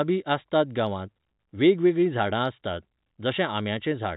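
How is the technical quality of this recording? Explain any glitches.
Nothing in this speech recording stood out as a glitch on listening.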